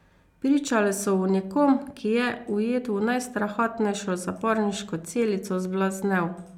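No dropouts, clicks, distortion or timing errors are audible anywhere in this speech recording.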